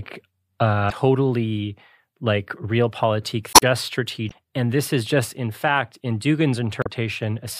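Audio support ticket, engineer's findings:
Damaged data in compressed stream: corrupt bytes break decoder frame sync, forcing resync; short disruptions in speech at 0.88–0.92, 3.52–3.63, 4.27–4.32, 6.81–6.87 s.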